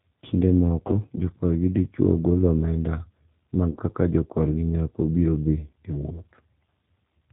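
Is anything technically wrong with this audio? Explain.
Yes. Throughout, the speech carries plainly audible G.729 codec damage at 8 kbit/s: a filter-plus-pitch-plus-pulse model rebuilds it, so it sounds rough and synthetic. A spectrogram shows nothing above 4 kHz and smeared, pulse-textured harmonics.

VoIP packet loss concealed by the speech codec occurs at 0.87–0.96 s (about 20 ms lost, fitting one packet) and 3.72–3.79 s (about 40 ms, fitting two), just before "kaka jokorgi nyako biro". The decoder repeats its last pitch and filter with falling gain, giving a fading buzzy tone or coloured noise. The waveform shows a shrinking stretch; the spectrogram shows a flat, steady, fading patch.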